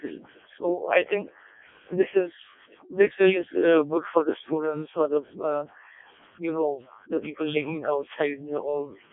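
From start to finish the speech has passed through a Codec 2 vocoder that sends only pitch, voicing, energy and spectral envelope, and rebuilds the voice from sine waves. The damage is heavy, fitting its lowest 0.7 kbit/s mode, so it sounds robotic and buzzy, confined to 250 Hz to 3.6 kHz, with nothing above 3.7 kHz.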